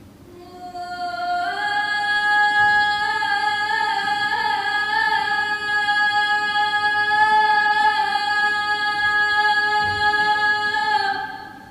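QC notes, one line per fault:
No faults found; nothing to log.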